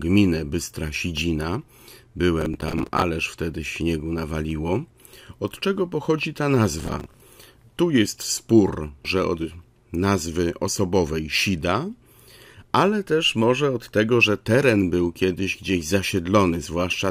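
From 2.41 to 3.02 s, and again from 6.80 to 7.22 s, the speech is overrun by processor overload crackle. Around twenty buffers of roughly 10 ms in each burst miss their deadlines, and each gap is filled with stale audio, so hard-edged fragments repeat in quick succession. The result is a gritty, tearing crackle over the sound rather than one clean dropout, and unlike clipping distortion it ignores loudness and stops abruptly once the load clears.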